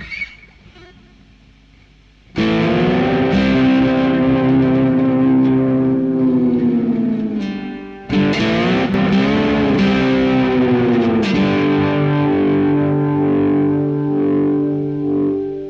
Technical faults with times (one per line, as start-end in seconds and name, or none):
8.86-8.94 one channel drops out